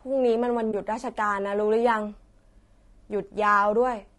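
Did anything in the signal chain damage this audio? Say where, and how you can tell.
Yes. Throughout the speech there is a rough, grainy texture, with noise filling the gaps between the voice's harmonics and a top band that sounds thin and somewhat synthetic. The damage is plainly audible and points to the codec stage, likely low-delay AAC compression of the AAC-ELD kind used for video calls. Its short frames resolve pitch harmonics poorly and spend bits inefficiently, and the degree of coarseness fits a bitrate around 32 kbps.

At 0.71 to 0.74 s the sound briefly dips for about 20 ms, fading down and back up. This is AAC frame loss with muting, arising between network transport and the decoder. The gap's length matches a single lost frame. The decoder zeroed that frame's spectrum, and the overlapping transform windows on either side smeared the silence into a gentle fade out and in.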